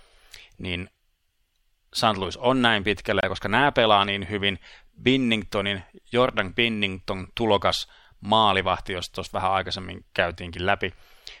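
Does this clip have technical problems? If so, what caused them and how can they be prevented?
Yes. A corrupt frame muted fault sits between 3.21 and 3.24 s, right after "on näin" and before "koska nämä pelaa niin". Damaged bits in the compressed stream made the decoder reject the data, and the player substituted silence. The abrupt hole, about 32 ms, fits two frames. Unlike a concealed packet loss, there is no smeared or repeated sound, and unlike a skip, timing stays intact. Protecting the stream with checksums and error correction, or using reliable storage and transport, prevents it.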